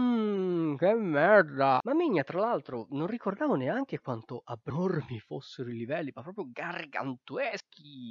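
At 1.80, 4.70 and 7.60 s the sound jumps forward abruptly, losing about a tenth of a second each time. The two sides butt together with no gap. This is likely audio missing between chunks, lost as each 3-second block closes.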